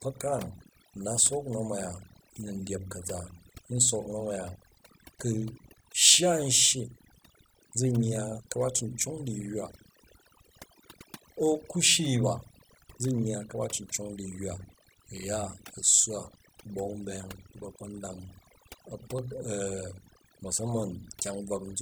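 Overdone noise removal runs throughout the speech: aggressive spectral gating pushes bands near the noise estimate to nothing, leaving twinkling specks in near-silence. From 1.18 s to 21.19 s, periodic USB or driver dropouts recur every 2.0 s, each blanking well under a millisecond with silence and producing a regular tick over the signal.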